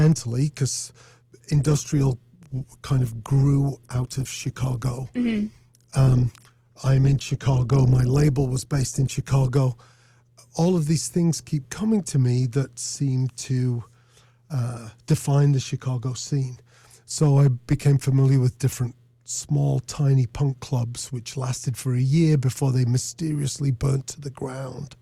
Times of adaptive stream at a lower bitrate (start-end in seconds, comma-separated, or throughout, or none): 1.51-9.51